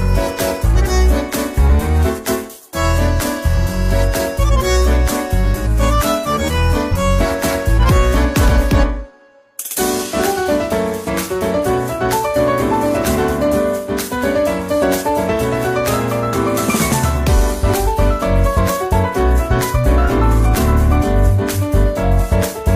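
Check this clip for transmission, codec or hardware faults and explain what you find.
One fault is present. From 6.88 to 6.93 s, damaged data in the compressed stream makes the decoder misread frames and lose sync, producing a brief glitch.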